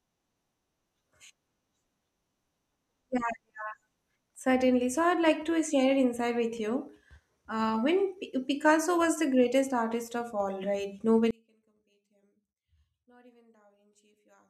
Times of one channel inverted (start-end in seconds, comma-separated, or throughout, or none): 11.31-14.50